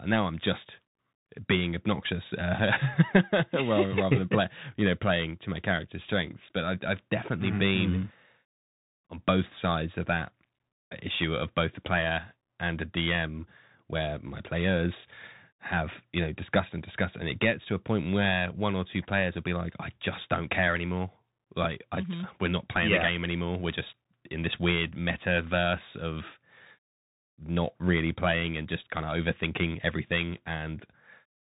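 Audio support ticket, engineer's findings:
Narrowband, boxy speech, whole clip. Band stops near 3.8 kHz, s sounds scratchy, grainy hiss under the voice, loud bright passages rough. Bluetooth CVSD headset codec in the path. One-bit delta coding, which fits a 64 kbps link, with an adaptive step that lags fast high-frequency swings, producing the edge distortion.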